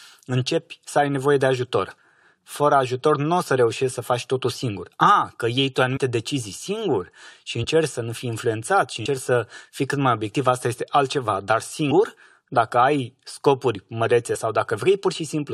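Jumps where the speech lurches forward, at 5.96–5.98, 7.63, 9.05, 11.90 and 14.34 s, come from compressed frames being skipped. Whole frames of roughly 23 ms went missing or were rejected, so the audio jumps ahead by anywhere from a fraction of a tenth of a second to about 150 ms.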